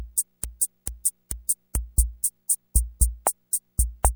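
From the start to 1.75 s, a broken-record loop repeats one 0.44 s fragment three times, likely from a stalled stream. The spectrogram shows identical repeating blocks.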